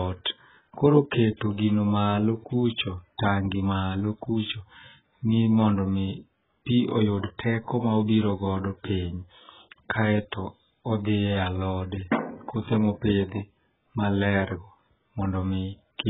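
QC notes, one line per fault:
Throughout, AAC compression: the speech sounds dull and smeared, with a warbling, fizzy edge on sibilants and nothing above 3.8 kHz. Likely heavy AAC-LC coding at a bitrate near 8 kbps, which forces a low cut-off.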